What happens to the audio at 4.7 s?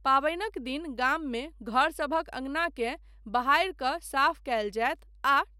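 A steady low drone sits under the speech at 4.7 s, a 50 Hz tone with some of its low harmonics. It is the same mains hum that runs through the whole clip, roughly 25 dB below the speech, so it never changes at this moment. The cause is power-line energy leaking into the signal path, through a ground loop or the field of a nearby transformer, and it sounds as a constant hum at the mains frequency.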